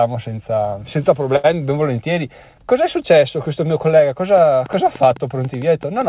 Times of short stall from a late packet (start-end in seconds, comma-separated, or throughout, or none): 1.36-1.46